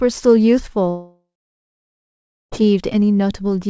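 A long network dropout runs from 0.90 to 2.54 s, most likely from audio failing to reach the receiver for about 1.6 s. The receiver carries the last sound forward as a decaying buzz that thins out within a few tenths of a second, leaving roughly 1.26 s of silence. The sound then resumes with that stretch simply gone. Around it, the call path's G.722 coding keeps everything below 8 kHz.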